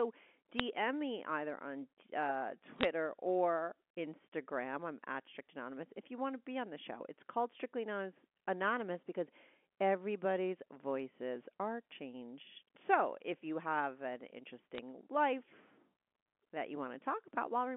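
At 0.58 s, from 2.76 to 2.85 s and from 14.75 to 14.78 s, bit errors on a digital phone line corrupt individual G.711 samples. A low error rate, around two flipped bits per thousand, turns sign or high-order hits into sharp ticks over the band-limited speech.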